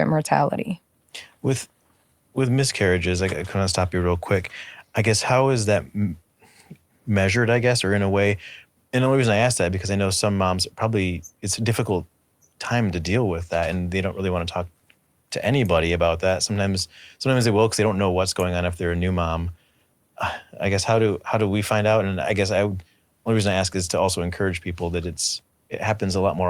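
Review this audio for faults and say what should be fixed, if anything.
No faults found in the recording; nothing to fix.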